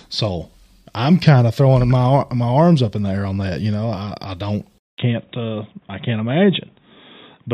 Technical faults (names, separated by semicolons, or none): input switched to a poorer device